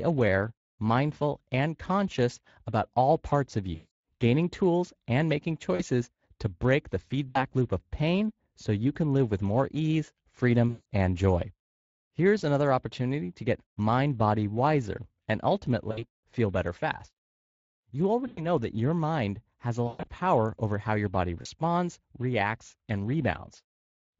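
Throughout, the speech passes through the Speex codec at a quality setting too low for clean excitation coding. The sound points to a rate of roughly 20 kbps. Too few bits go to the excitation that drives the vocal-tract filter, so the voice has a plainly audible hoarse, grainy roughness.

Packets are then lost at 3.75 s, 5.75 s, 7.29 s, 10.69 s, 15.91 s, 18.27 s, 19.87 s and 21.41 s, and each gap is covered by VoIP packet loss concealment in the speech codec. The decoder keeps repeating its last pitch and filter while turning the gain down, so each gap becomes a smeared buzz or coloured noise that fades. The gaps run from 40 ms to 160 ms. The longest, 160 ms, fall at 3.75 s, at 10.69 s between "live with more ease" and "and joy", and at 19.87 s after "your mind has a". That last one is broken up over about 200 ms, with a longest run of 120 ms, and ends before "power over how your". Because each rebuilt frame feeds the next, the voice stays thin for a moment after each gap.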